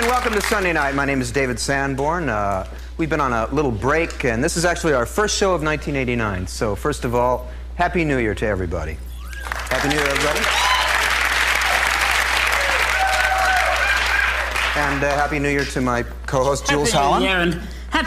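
From start to finish there's a steady mains hum sitting under the sound, a low drone at 60 Hz, pretty loud at roughly 10 dB below the signal. That points to a ground loop or a nearby transformer bleeding the power line into the audio path.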